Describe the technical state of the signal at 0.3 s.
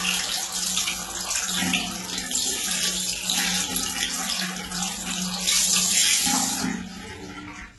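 At 0.3 s you're hearing HE-AAC compression damage, and it runs through the whole clip. The treble sounds synthetic and gritty, cut off above 11.8 kHz, heavy enough to point to a very low bitrate around 16 kbps. The likely cause is spectral band replication rebuilding the highs from copied lower bands.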